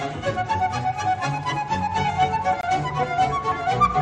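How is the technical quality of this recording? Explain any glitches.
The recording has one glitch, a gap between stream segments at 2.61 to 2.63 s. The time stamps of two consecutive segments, which appear to be about 2.0 s long, fail to line up, leaving about 21 ms with no audio assigned. The player fills that stretch with silence, so the sound cuts out abruptly and resumes just as sharply. Nothing is lost; the sound after the hole simply arrives 21 ms late.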